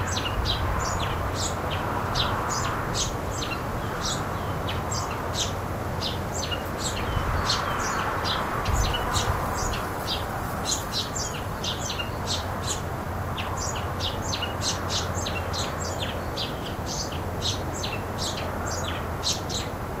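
From 8.4 to 13.28 s, a call bitrate drop makes the sound rough and coarsely coded, which fits the encoder falling from 64 to about 22 kbps.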